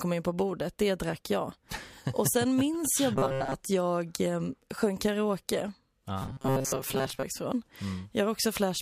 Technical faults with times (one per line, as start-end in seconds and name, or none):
3.16-3.55 robotic sound from repeated short buffers
6.22-7.23 robotic sound from repeated short buffers